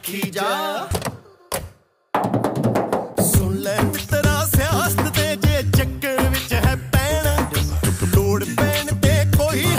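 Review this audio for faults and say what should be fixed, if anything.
No faults were found, so nothing needs fixing.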